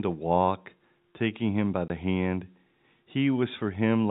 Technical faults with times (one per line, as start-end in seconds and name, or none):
1.88 packet loss filled with silence